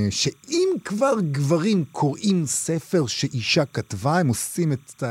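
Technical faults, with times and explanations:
Throughout, timecode bleed: a faint chirping warble runs steadily behind the speech, roughly 40 dB below it. Linear timecode is a square wave that flips between two pitches, here near 1 and 2 kHz, so when it leaks from an adjacent track or cable into the audio path it becomes a thin, buzzy twitter. The pattern repeats at 29.97 frames per second, which gives the warble its rapid, regular, mechanical rhythm.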